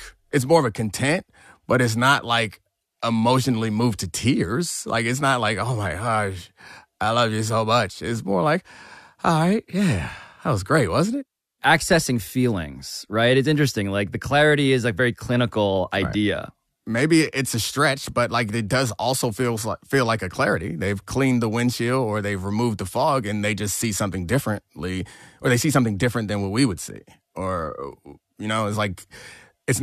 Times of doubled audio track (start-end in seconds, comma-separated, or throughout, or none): none